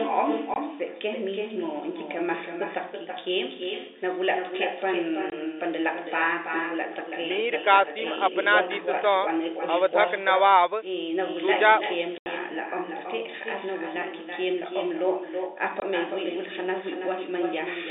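From the start of the speech to the end, a loudspeaker at the far end feeds its own microphone and no echo canceller strips that sound out, so it returns after the network round trip. The result is an echo with no canceller: every phrase is trailed by a copy arriving roughly 300 ms later and sitting only about 6 dB below the original, thinner, smearing syllables into one another.

Packet loss filled with silence breaks the speech four times. At 0.54 to 0.56 s, 5.30 to 5.32 s and 15.80 to 15.82 s, a single 20 ms stretch goes missing. At 12.18 to 12.26 s an 80 ms gap opens, which fits four consecutive 20 ms packets. The receiver substitutes silence, so each hole cuts the sound dead with hard edges, all heard through the narrow 300 Hz to 3.7 kHz telephone band.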